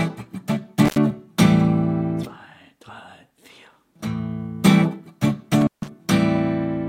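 The sound drops out briefly with crackle at each edge, at 0.85–0.98 s (open about 78 ms) and 5.61–5.88 s (about 152 ms), which is intermittent contact from a loose cable or plug.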